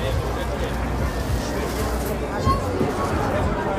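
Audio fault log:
2.88 s damaged data in a compressed stream: corrupt bytes make the decoder misread a frame and resync, giving a brief disturbance seen as a thin broadband smear and waveform glitch.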